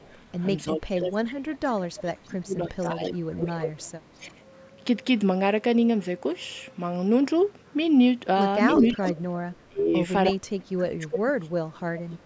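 At the very start, 0.00 to 0.07 s, a faint echo leak appears about 330 ms behind the speech, roughly 35 dB down, likely from incomplete echo cancellation on a loudspeaker end.

From 0.64 to 3.55 s, speech is suppressed in double talk, dipping up to roughly 25 dB for about two seconds in total, likely because the canceller ducked both talkers. On a waveform the envelope caves in, and the spectrogram shows the harmonics fading.

Overlapping this, 2.79 to 4.32 s brings a stronger echo leak, a copy delayed about 338 ms at roughly 10 dB below the speech. It appears as a ghost duplicate of the spectrogram pattern shifted right. A brief dip of about 10 dB hits 4.17 to 4.33 s.

From 8.74 to 9.56 s an echo leak returns loud, only about 5 dB under the speech and delayed about 351 ms, with a shallow suppression dip of about 5 dB between 8.80 and 9.06 s.

From 9.68 s to the end, double-talk suppression cuts in hard, with drops of roughly 30 dB over about two seconds. 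The waveform shows chopped gaps, and high frequencies vanish in patches on the spectrogram.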